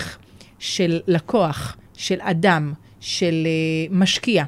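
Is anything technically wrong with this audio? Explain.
No, nothing is technically wrong with this audio.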